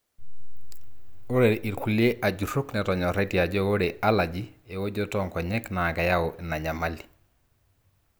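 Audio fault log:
Nothing to log here, as the speech comes through with no faults to note.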